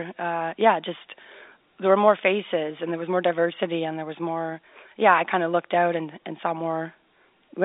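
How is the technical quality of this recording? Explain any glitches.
No glitches; ordinary telephone-band speech throughout.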